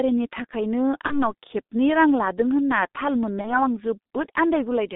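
Throughout, heavy G.723.1 codec damage narrows the speech to 200 Hz–3.7 kHz and makes it hoarse and smeared, which fits roughly 6.3 kbit/s, beyond simple band-limiting.

At 1.07–1.19 s and 3.41–3.61 s, VoIP packet loss concealed by the speech codec bridges one lost 30 ms frame with a fading buzzy tone or coloured noise rather than silence. Weak sound lingers afterwards.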